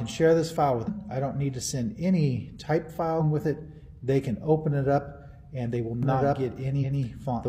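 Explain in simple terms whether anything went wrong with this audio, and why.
Damaged data in a compressed stream at 0.84–0.90 s, 3.16–3.21 s and 6.78–6.84 s: corrupted bits confuse the player, which briefly loses its place, causing short glitches.

A doubled audio track starts abruptly at 6.03 s and continues to the end. An equally loud copy of the sound trails about one and a half seconds behind, likely from an edit that layered two copies out of step.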